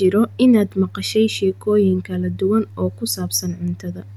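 No technical faults found in this speech recording; nothing to flag.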